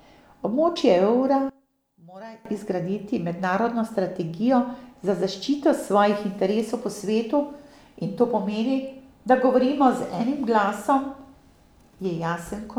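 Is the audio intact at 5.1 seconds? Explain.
Yes, the speech at 5.1 seconds is intact, with no dropout, click, distortion or other fault audible at that moment.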